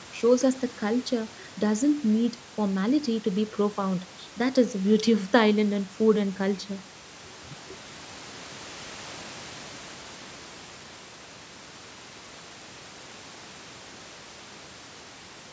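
No technical faults detected.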